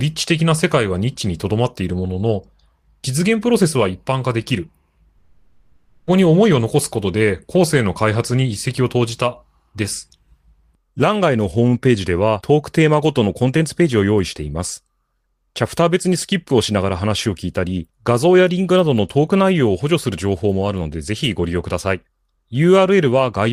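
From 5.17 to 6.10 s the speech gives way to a smeared continuation of the last sound, a buzzy hiss that fades over about 0.9 s without ever reaching true silence. The speech then resumes with that stretch gone. This is likely a long network dropout, with the receiver's concealment filling the whole gap. It differs from short packet loss, which leaves only brief warbles, and from a plain mute, which would drop straight to silence.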